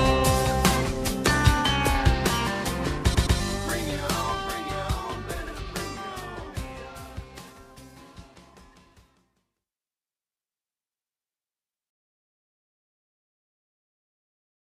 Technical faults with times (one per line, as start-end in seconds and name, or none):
3.13-3.37 repeated frames
5.46-5.53 repeated frames